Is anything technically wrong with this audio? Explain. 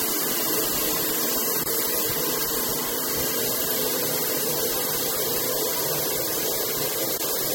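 Yes, three kinds of fault.

MP3 compression runs throughout, likely from encoding at a low bitrate around 64 kbps. Weak frequency lines drop in and out and the treble is cut, giving a plainly audible watery, swirly smear.

A repeated buffer occurs at 0.32 s. A 1.33 ms chunk, which fits a 64-sample buffer, played once more because fresh audio arrived late, producing a brief click.

Gaps at joins of encoded pieces open at 1.64 s for 25 ms and at 7.18 s for 24 ms. Separately encoded pieces kept their start delay and end padding, leaving short gaps with smeared edges before the sound resumes.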